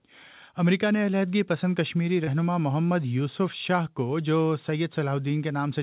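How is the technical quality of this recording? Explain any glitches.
The recording has one glitch, over a narrow call-grade band with nothing above 4 kHz, which fits a G.711 mu-law path.

From 2.24 to 2.30 s there is a short concealed packet loss. About 40 ms of audio was lost, and the receiver bridged about 30 ms by extending the preceding sound. It is heard as a brief smear or wobble. On a spectrogram it appears as a short stretch of repeated, smoothed texture; on the waveform, as a small repeated or slightly damped section.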